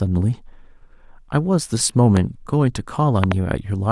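A speech clip with two loud pops: a single one at 2.17–2.19 s, about 10 dB above the speech, and a double pop at 3.24–3.34 s, about 20 dB above. A voltage pulse, likely from a plug, switch or static, was added to the signal. The speech carries on underneath, unlike a dropout.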